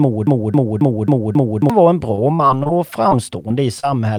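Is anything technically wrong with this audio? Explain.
Yes. There are three kinds of fault.

From the very start to about 1.70 s, the audio is caught in a broken-record loop that is already under way when the clip begins. A piece roughly 270 ms long plays five times back to back, exactly the same each time, until normal speech resumes with "var en". The likely cause is a player, encoder or stream that stalled and kept resending the last fragment it held. The audio meant for that stretch is gone. What separates it from packet loss is that a whole identical fragment repeats, with no patched holes.

From 2.15 to 2.71 s, just after "var en", there is repeated packet loss with a robotic sound. Five short gaps, the longest about 22 ms, arrive close together, and about 0.1 s of audio is missing in total. Each hole was patched by continuing the preceding sound, so about 17% of this half-second is concealment. 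The result is choppy, with pieces missing. Unlike the loop, nothing repeats as a recognisable chunk. Instead, brief holes keep breaking up the flow.

Three isolated instances of short concealed packet loss follow, at 3.09 to 3.13 s, 3.49 to 3.52 s and 3.80 to 3.85 s, each covering about 20 ms of missing audio. The receiver extended the last sound across each hole and then blended back into the real signal. Each is heard as a brief smear or wobble. These differ from the robotic stretch because they are single, separated events rather than a dense run of gaps.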